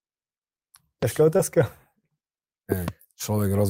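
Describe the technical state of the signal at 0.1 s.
At 0.1 s the audio is intact, with no audible technical fault at that point.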